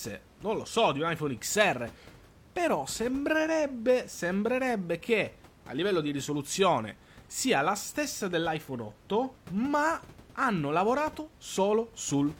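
No technical faults are audible.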